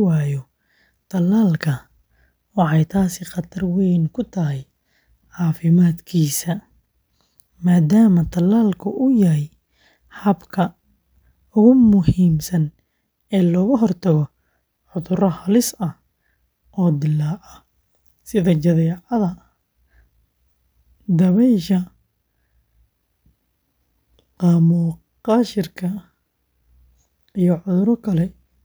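Nothing technical stands out anywhere in this speech recording, so there's no problem here to time or trace to a cause.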